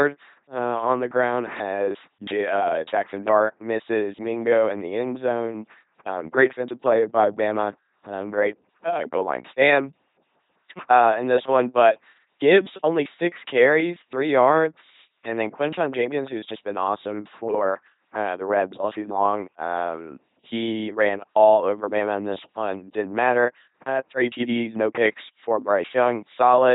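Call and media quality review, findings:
LPC-10 vocoder across the whole speech clip. The speech is modelled as a ten-pole vocal tract filter fed by either a pulse train or noise, at 2.4 kbit/s. The result is a buzzy, mechanical robot voice, with heavy codec damage: wrong voiced/unvoiced decisions turn into stray buzz or hiss, and nothing is left above 3.8 kHz.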